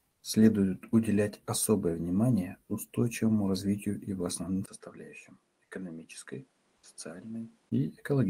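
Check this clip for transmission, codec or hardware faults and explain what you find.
Two faults are present. From 0.11 to 0.23 s, comfort noise replaces the background for 120 ms, likely from discontinuous transmission: real background, about 48 dB below the loudest sound, becomes flat synthetic noise about 2 dB quieter.

From 4.66 to 7.72 s, the input is switched to a poorer device, likely: after a 20 ms gap the band stops at 11.4 kHz, the level falls by around 10 dB, and new noise appears roughly 35 dB down.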